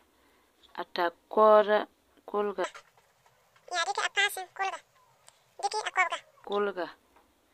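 From 2.64 to 6.45 s a section at the wrong speed runs at 1.95 times normal, pushing the speech up roughly ten semitones and hurrying it, likely a clock mismatch in playback or editing. Unlike pitch shifting, timing and pitch change together.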